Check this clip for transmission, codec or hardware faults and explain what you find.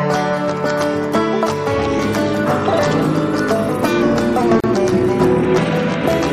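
One codec fault is present. At 4.60 to 4.64 s there is a gap at a join of encoded pieces: separately encoded segments, apparently 6 s long, were spliced untrimmed, so encoder delay and last-frame padding leave a 34 ms silence with smeared edges before the sound resumes where it stopped.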